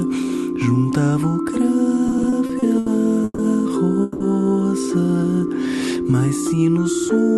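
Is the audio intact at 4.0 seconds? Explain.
No. From 4.02 to 4.22 s the sound stalls into a fading buzz or hiss, then resumes where it stopped. This call audio freeze likely comes from late packets draining the jitter buffer.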